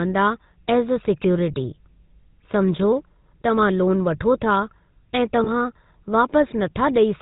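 From start to finish the speech passes through the GSM full-rate codec. The coder models the vocal tract and excites it with a sparse, regularly spaced pulse train, keeping only one excitation sample in three. That gives the plainly audible buzzy, gravelly roughness, which fits a 13 kbps full-rate coder, and nothing reaches above 4 kHz. Unlike ordinary narrowband telephone filtering, which only dulls the sound, this adds a grainy rasp that clings to every voiced stretch.

Between 5.44 and 5.49 s there are lost GSM frames. A single 20 ms frame went missing, and the decoder filled the gap by reusing the last good frame's settings. For that instant the sound hangs as a brief, rough metallic ring before normal decoding resumes. A packet-loss dropout or clipped gap would leave silence or a click, but here the tone sustains. The gap is too short to fade to silence.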